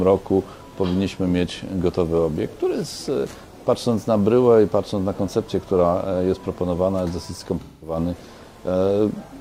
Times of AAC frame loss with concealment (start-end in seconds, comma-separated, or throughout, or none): 7.60-7.97